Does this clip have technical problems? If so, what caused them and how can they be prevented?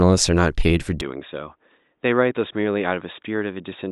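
Yes. From 1.01 s onward the speech abruptly dulls, with nothing above 3.8 kHz, drops about 10 dB and gains a new faint noise floor. This is likely an input switched to a poorer device. The simultaneous change in level and noise, not just bandwidth, separates it from a filter. Fixing the input device in system settings before recording prevents it.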